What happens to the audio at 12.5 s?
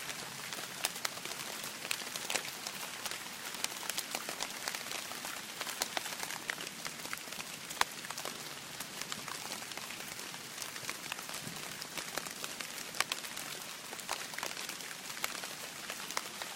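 Nothing goes wrong at 12.5 s: the audio continues intact through that moment, with no dropout, click or other defect to be heard.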